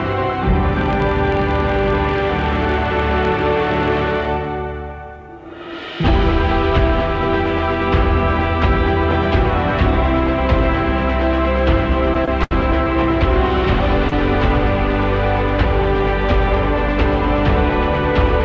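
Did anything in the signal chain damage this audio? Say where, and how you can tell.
Yes. From 0.72 to 4.41 s a processing stage shows a filter restarted on every block: small ticks repeat at 43.1 Hz, fitting a 1024-sample block. It differs from mains hum because the buzz rises and falls with signal level and disappears in quiet passages.

In the network and jitter-buffer stage, three short stalls from late packets hold a sound too long: 24 ms at 12.25 s, 76 ms at 12.43 s, and 31 ms at 14.09 s. Unlike a dropout, nothing is skipped. Playback resumes exactly where it paused, sliding timing later. The 8 kHz ceiling reflects the G.722 call path.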